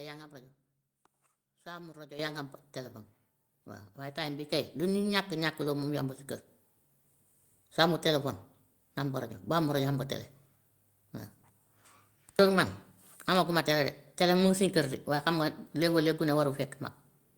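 At 2.19 s, 4.44 s and 6.48 s, microphone volume steps up by about 11, 5 and 2 dB. Speech and background jump together. Automatic input gain likely raised the device level.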